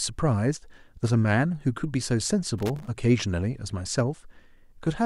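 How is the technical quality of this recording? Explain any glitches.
The recording has one clear glitch: a burst of loose connector crackle from 2.58 s to 2.88 s, lasting about 0.3 s. A worn or dirty contact somewhere in the cable or jack path is making and breaking rapidly, chopping the speech signal on and off many times in quick succession, while any DC present on the line turns each break into a pop. The result is a short, irregular scratching crackle laid over the speech for that stretch.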